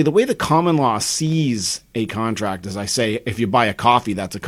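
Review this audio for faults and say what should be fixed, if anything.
Three sharp single clicks in the speech, at 1.32 s after "way the common law", at 2.47 s just before "as I say if", and at 3.92 s after "I say if you", are likely dropped samples. Roughly a tenth of a millisecond goes missing at each point, so the waveform jumps abruptly. Preventing this means finding and fixing the buffer underruns or stream discontinuities in the capture or transfer chain.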